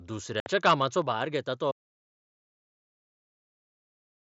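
At 0.40 s the speech breaks for about 60 ms, ending at 0.46 s, as unconcealed Bluetooth headset packet loss. A run of several consecutive short voice packets between headset and phone never arrived, and nothing filled the gap, so the sound simply stops and restarts with hard edges. A waveform shows a flat notch with vertical walls. A spectrogram shows a clean vertical blank band across all frequencies, with no fade at either side.

From 0.65 to 0.74 s the loudest stretch turns harsh and buzzy, which fits microphone overload. The input was driven roughly 8 dB past what the converter could hold, and a small share of samples, a few percent, were flattened at the rails. The waveform shows squared-off, plateaued peaks. On a spectrogram, clipping smears energy upward as a brief vertical haze of added high harmonics over that syllable region.

At 1.02 s the whole level, sound and background together, drops abruptly by about 4 dB. 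This is most likely a microphone volume stepped down by the call software reacting to the clipped peaks just before. The waveform envelope shows a single clean step to a smaller amplitude that never recovers. The spectrogram shows every band darkening at the same instant, a vertical line marking where the brightness falls.

From 1.72 s to the end the audio cuts out completely in an audio dropout to silence, likely from the input device or link failing while the recorder kept writing silence. No room tone or hiss survives, so it is dead digital silence rather than a quiet room. The waveform is a flat line. The spectrogram goes uniformly black from that point.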